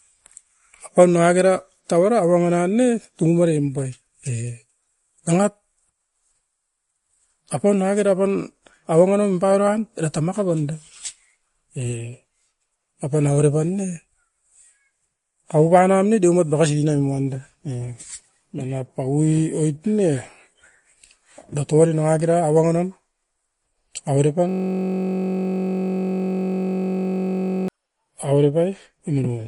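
From the start to the end of the speech, the audio carries MP3 compression damage that is plainly audible and likely comes from a low-bitrate encode, consistent with something around 48 kbps. Nothing is present above 11.2 kHz, so sibilants sound dull and clipped at the top. With too few bits to go around, weak spectral components drop in and out between frames, giving the speech a watery, swirling texture and softened consonant onsets.

From 24.49 s to 27.68 s a system hang loop replaces the speech. The playback path stalled while the output hardware kept replaying one stretch of its ring buffer. That stretch is 21.33 ms long, which fits a 1024-sample buffer, and it repeats about 150 times at 46.9 Hz. The result is a steady, rough buzz at that rate instead of continuing speech, lasting a little over three seconds before normal audio returns.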